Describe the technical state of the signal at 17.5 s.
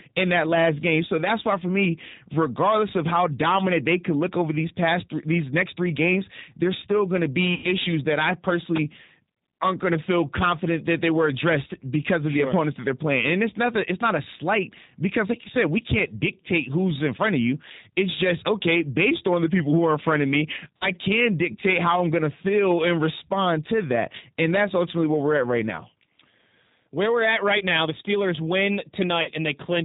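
At 17.5 s the speech has hard clipping, present throughout. It is overdriven by about 16 dB, so a small share of peaks are cut flat. This adds harsh crackle on loud syllables. The G.729 codec also runs the whole length, at 8 kbit/s. It rebuilds speech from a vocal tract model, removes everything above 4 kHz, and leaves a plainly rough, synthetic, muffled sound.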